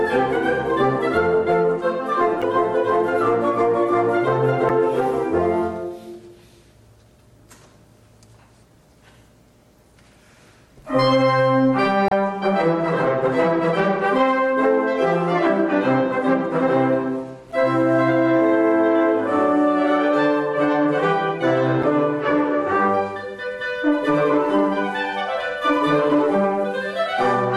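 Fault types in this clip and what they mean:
Damaged data in a compressed stream: corrupt bytes make the decoder misread frames and lose sync, causing brief blips at 2.41, 4.68, 12.08, 17.51 and 21.82 s.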